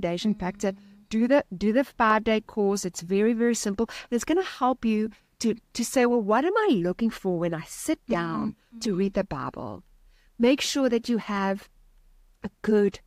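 No technical fault can be heard anywhere in the recording, and the signal stays steady and intact throughout.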